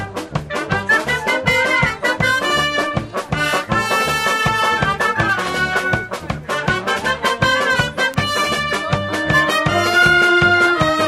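From 3.92 to 6.81 s, sample clock jitter adds a grainy hiss that tracks loud, bright passages. The converter clock wanders by a couple of microseconds, leaving errors around 30 dB below the signal. At 8.14 s, a bit error spike produces a single sharp broadband tick. A flipped bit briefly pushes the sample value off by a power of two before it snaps back, consistent with a two-sample corruption.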